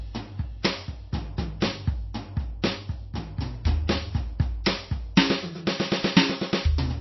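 From start to finish the music has a hard ceiling: nothing gets through above about 5.8 kHz, so the top end sounds dull and boxed in, and the codec damage is plainly audible the whole way through. That's most likely MP3 compression starved of bits, which fits a very low rate of around 24 kbps. The encoder chops the treble at a fixed point and drops the quieter frequency lines as they flicker in and out frame to frame, giving that watery, swirly texture.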